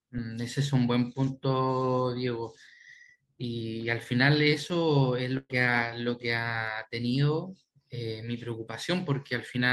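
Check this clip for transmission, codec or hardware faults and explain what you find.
One transmission fault is audible. From 5.37 to 5.51 s there is a burst of packet loss: 120 ms of speech never arrived, so the receiver stretched and faded the last sound, went silent for 20 ms, then resumed further on.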